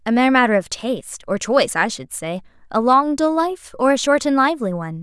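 Nothing technically wrong turns up in this bit of speech, so there's nothing to flag.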